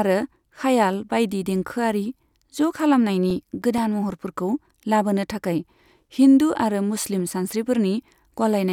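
A speech recording carrying CD scratch ticks: ten regular clicks from 3.15 to 4.57 s and six more from 7.20 to 7.99 s, about seven a second. Each marks one disc rotation past a blemish whose damage exceeds error correction, so the player patches a few milliseconds. These show as thin vertical spectrogram lines and tiny waveform notches.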